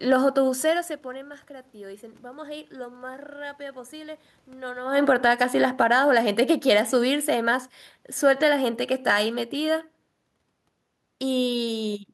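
From 4.8 to 6.0 s the automatic gain is falling: the control judges the input too loud or its background noise too strong and pulls its gain down by about 8 dB, then again by about 6 dB from 6.52 to 9.88 s. The room noise sinks right along with the voice, which separates this from the talker's own movement around 5 s. Those gradual slides likewise set it apart from a brief fader move.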